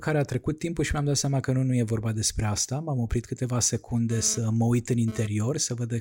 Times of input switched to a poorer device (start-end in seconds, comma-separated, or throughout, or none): none